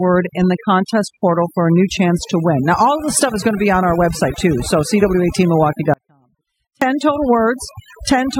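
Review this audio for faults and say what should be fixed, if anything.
Overdone noise removal runs through the whole clip. The noise reduction was pushed too hard, so individual frequency bands are pulled down or switched off whenever they sit close to the estimated noise floor, and the softer parts of the speech are cut along with the noise. The background drops and breaks up into twinkling specks. To prevent it, apply gentler reduction and check the result against the untreated recording.

Audio dropout to a faint residue occurs from 5.94 to 6.82 s, a gap of about 0.88 s. The speech cuts out abruptly rather than pausing or fading, and during the gap only a faint trace of sound remains, roughly 40 dB below the normal level. This is likely a brief loss of the signal while the rest of the chain stayed live, leaving only a weak leak of the audio. To prevent it, secure the connection or link carrying the signal and monitor the recording for breaks while capturing.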